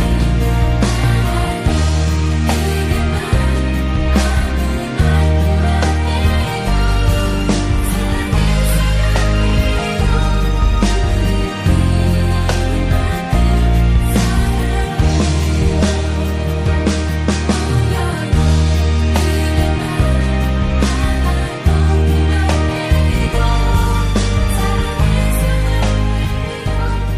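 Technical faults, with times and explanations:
Throughout, MP3 compression: weak detail flickers in and out, giving a watery, swirly texture and smeared attacks, likely from low-bitrate MP3 encoding around 64 kbps. A spectrogram shows speckled gaps.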